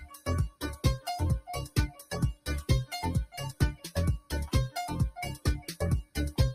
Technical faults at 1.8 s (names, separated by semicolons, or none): noise suppressor applied to music or sounds; sound cut by the noise suppressor